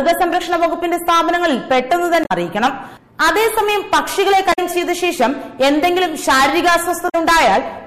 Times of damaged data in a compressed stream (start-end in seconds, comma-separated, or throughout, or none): 2.21-2.32, 4.49-4.59, 7.05-7.15